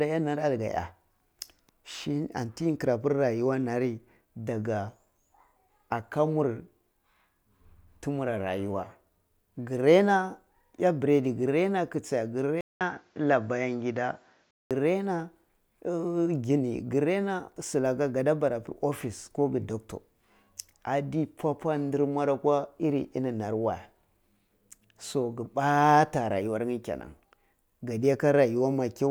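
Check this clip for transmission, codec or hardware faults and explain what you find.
One fault stands out: an input switched to a poorer device. From 12.61 to 14.71 s the speech turns duller and boxy, with nothing above 7.6 kHz. A gap of about 200 ms marks the switch. Loudness holds roughly steady, but a new background noise appears, roughly 45 dB below the speech. This is likely the system changing to a different microphone or headset input, whose narrower band, tone and noise floor replace the original before it switches back.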